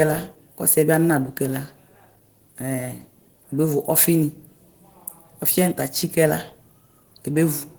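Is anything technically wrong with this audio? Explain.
Yes. Throughout, the speech sounds hoarse and slightly robotic, typical of Opus voice compression: a coarse linear-prediction core with a thin upper layer, fitting roughly 16 kbps.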